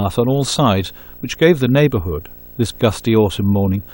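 Video or display buzz runs through the whole of this speech clip. A screen or video cable is coupling into the audio path, so a buzz at the picture's field rate of 59.94 Hz sits under the speech with a gritty hash above it, while a very high line-rate whine near 15.7 kHz rides on top. The interference stays roughly 25 dB below the speech, steady from start to finish.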